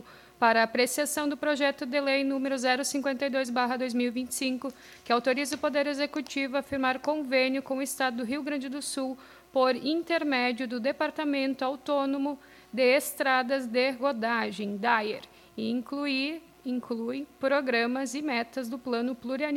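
No technical faults can be heard anywhere in the audio. There is nothing to place in time or to explain.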